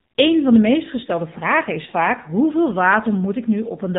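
From start to finish the speech carries the sound of the AMR narrowband mobile codec, and the damage is plainly audible. Everything above 4 kHz is gone, so it has that boxed-in phone-call dullness, and the low bit budget shows as a buzzy, synthetic edge on the voice, since the codec rebuilds it from a vocal-tract model fed by sparse pulses. The harshness fits one of AMR-NB's lower modes, around 7.4 kbps.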